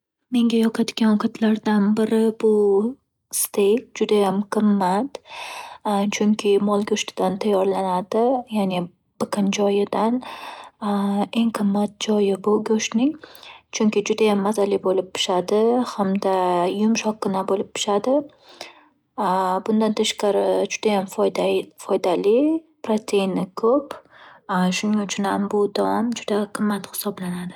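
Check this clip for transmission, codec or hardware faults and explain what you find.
No transmission, codec or hardware faults turn up anywhere in the speech.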